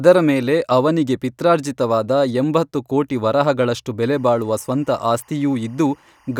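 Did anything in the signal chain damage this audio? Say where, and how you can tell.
Yes. From 4.16 s to 6.40 s, right through to the end, there's timecode bleed in the analogue wiring. Under the speech you get a faint chirping warble, roughly 40 dB below the signal, flipping between pitches around 1 kHz and 2 kHz. That two-tone square-wave pattern, with a steady cadence that fits 24 fps code, is linear timecode from a neighbouring track or cable leaking into the audio line through crosstalk.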